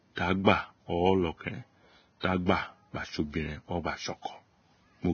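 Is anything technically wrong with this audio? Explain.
Yes. Throughout the speech the treble stops sharply at 6.5 kHz and what remains above the midrange sounds hissy and grainy. This is heavy Vorbis compression, likely at a low setting that fits a bitrate near 18 kbps. The codec quantised fine detail into noise-like texture. Unlike a simple low-pass filter, the band that remains is roughened, not just dulled.

Pre-echo appears from 0.44 to 0.47 s and from 2.20 to 2.24 s: a short hiss runs about 25 ms and 32 ms ahead of sharp onsets. The codec spread each block's quantisation noise into the quiet moment before the attack. Because the hiss comes before the onset rather than after it, this is not reverb or ringing.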